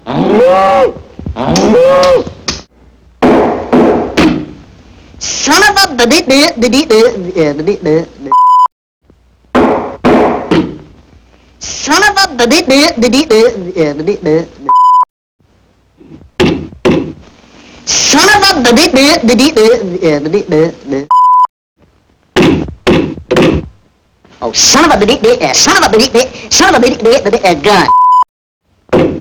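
Hard clipping runs through the whole clip, from start to finish. The signal arrives about 10 dB hotter than the stage it passes through can handle, so every peak that exceeds the ceiling is sliced off flat, and something like seven percent of the audio sits pinned against that limit. Those squared-off tops generate harmonics high up the spectrum, heard as a harsh, gritty fuzz on each loud moment.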